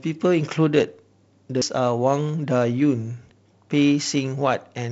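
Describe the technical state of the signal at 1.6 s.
At 1.62 s the speech jumps: roughly a third of a second of audio is missing, and the two sides are butted straight together with no silence between them. That abrupt splice, rather than a quiet gap, sets it apart from a dropout or muted packet. The likely cause is audio missing between chunks, with a piece lost as the recorder closed one 2.0 s block and opened the next. The surrounding G.722 wideband band-limit near 7.9 kHz is unaffected.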